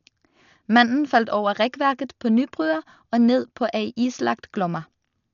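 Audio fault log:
Throughout: Dolby Digital compression, heavy codec damage. Nothing is heard above 6.9 kHz, so the speech sounds dull, with rough, fluttering noise around tonal parts. This is likely low-bitrate AC-3 coding, fitting about 48 kbps, where unallocated frequency lines are filled with dither noise.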